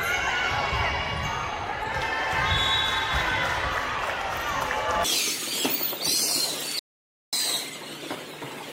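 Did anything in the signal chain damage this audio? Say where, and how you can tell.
Yes. The input feeding the recorder was likely lost for a moment, from a dropped connection or a brief mute somewhere upstream, while the capture stage kept writing silence. The result is an audio dropout to silence from 6.79 to 7.33 s: the sound cuts off abruptly, about 535 ms of it is gone, and it resumes mid-flow. You can tell because the gap is silent, with no room tone or noise floor underneath.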